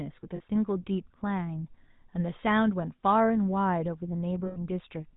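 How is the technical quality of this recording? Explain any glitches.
The speech is plainly degraded by telephone coding, with two brief dropouts.

GSM full-rate codec, throughout: the coder models the vocal tract and excites it with a sparse, regularly spaced pulse train, consistent with the 13 kbps full-rate standard. Nothing above 4 kHz survives, and the voice carries a plainly audible buzzy, gravelly roughness.

Lost GSM frames, at 0.36 to 0.41 s and 4.46 to 4.58 s: the decoder repeated the last good frame's parameters, covering about 40 ms and then about 100 ms. Each gap is heard as a short, rough metallic ring, longer the second time.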